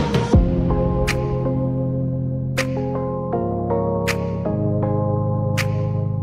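No technical faults can be heard at any point in the audio.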